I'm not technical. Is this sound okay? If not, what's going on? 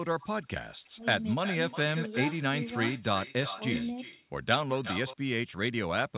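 No, there's an echo leak: a delayed copy of the speech trails it by about a third of a second, at 0.2 s, 0.85–1.78 s, 1.95–4.26 s and 4.83–5.17 s, likely from a speakerphone whose echo cancelling missed some sound.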